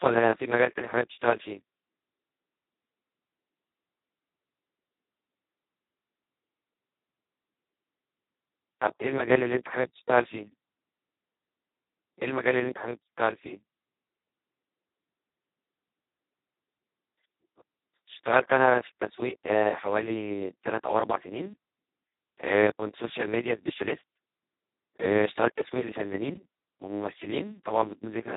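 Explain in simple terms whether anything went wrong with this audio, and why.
The whole recording was squeezed through the Speex codec at a very low quality setting. Too little data was kept to rebuild the speech properly, so it sounds hoarse, buzzy and robotic. Nothing above about 3.8 kHz survives, which makes it dull and muffled.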